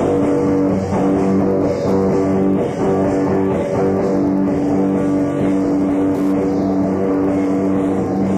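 Wi-Fi interference runs through the whole clip as steady ticking about ten times a second, around 35 dB below the audio. A nearby Wi-Fi radio's beacon, sent every 102.4 ms, is being picked up and rectified by the audio circuit, turning each radio burst into a click.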